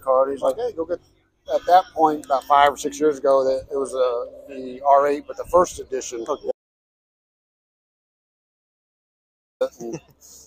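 An audio dropout to silence runs from 6.51 s to 9.61 s, removing about 3.1 s of sound. The input was likely lost while recording continued writing silence, so the audio cuts off abruptly into dead digital silence with no room tone, then resumes mid-flow.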